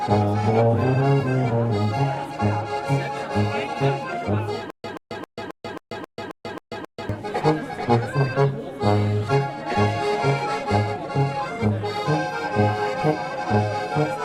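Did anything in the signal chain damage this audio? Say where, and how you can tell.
Yes. Stutter with silent gaps from 4.70 to 7.09 s: a 130 ms burst repeats nine times every 268 ms with silence between, likely a stalled playback stream.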